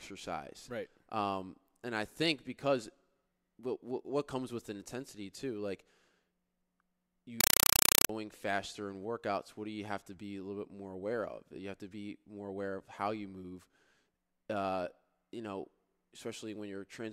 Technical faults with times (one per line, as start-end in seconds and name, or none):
7.41-8.09 compressed stream played as audio